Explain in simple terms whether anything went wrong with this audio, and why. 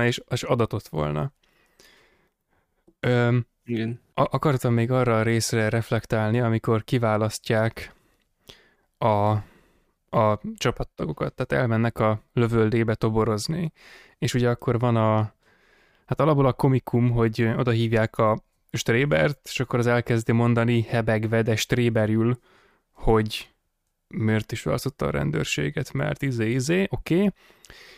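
Nothing went wrong here; the speech comes across steadily the whole way, with no dropouts, glitches or odd noises to point to.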